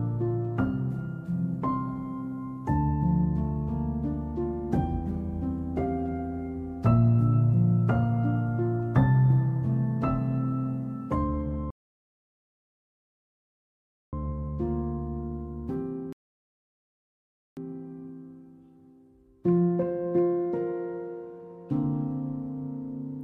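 Rebuffering stalls at 11.71–14.13 s and 16.13–17.57 s: playback exhausted its downloaded audio and halted, leaving silences of about 2.4 s and 1.4 s. Each time, the sound resumes exactly where it broke off, so nothing is skipped, only delayed.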